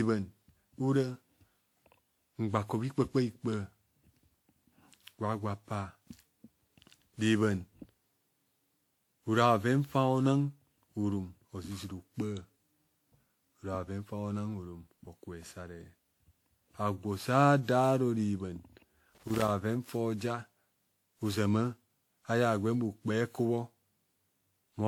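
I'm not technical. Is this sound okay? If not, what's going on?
No, there are a few problems. All the way through, the speech sounds swirly, smeared and a bit hollow, and the starts of sounds are blurred. That's generation loss, likely from the audio being squashed with a lossy format and unpacked again about ten times, each pass adding its own damage.

At 17.85 s there's one sharp, isolated tick that has nothing to do with the speech. That's a bit error spike: a single digital value got flipped, so one sample jumps way off for an instant and then snaps back.

From 19.15 to 19.5 s you'll hear an irregular burst of crackling and scratching. That's loose connector crackle, where a worn or dirty plug keeps making and breaking contact, chopping the signal up.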